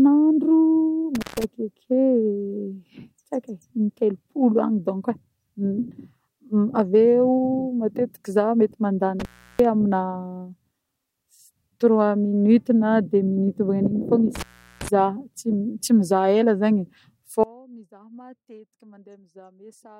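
Intermittent contact breaks the speech at 1.15, 9.20 and 14.35 s. The line opens for about 150, 340 and 390 ms, with crackle at each edge. At 17.44 s an audio dropout leaves only a faint residue, far below normal level, to the end. The signal was likely lost while the later path stayed live.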